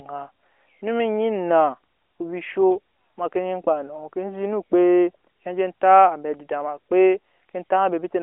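It's a speech clip carried over a narrowband mobile line, with nothing above about 3.7 kHz, and there's no technical fault in it to point to at any moment.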